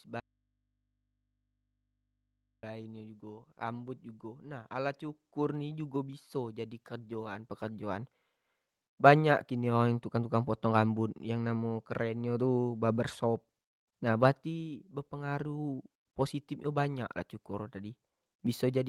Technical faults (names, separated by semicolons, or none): audio dropout to a faint residue